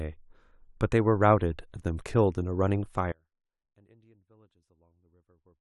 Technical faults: damaged data in a compressed stream; audio dropout to a faint residue

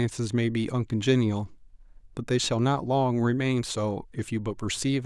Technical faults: none

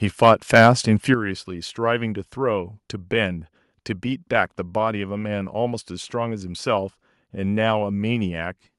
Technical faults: microphone overload; microphone volume stepped down

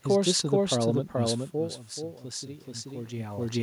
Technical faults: doubled audio track; automatic gain rising

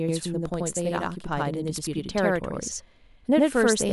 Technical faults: channel delay (doubling)

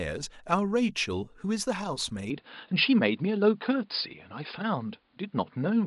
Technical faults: input switched to a poorer device

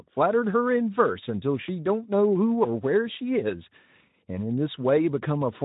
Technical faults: none

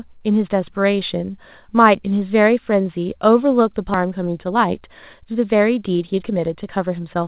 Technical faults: skip ahead; jitter buffer speed-up

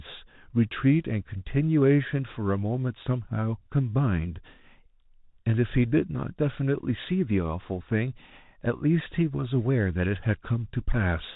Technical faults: Bluetooth CVSD headset codec

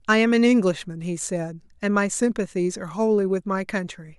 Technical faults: none

